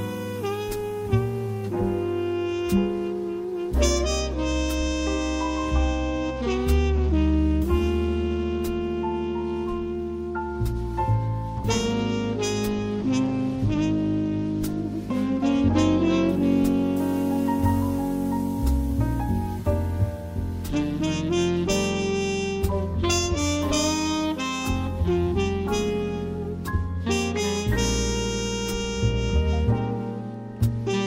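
Nothing technically wrong can be heard anywhere in this audio. There is no fault to place in time or trace to a cause.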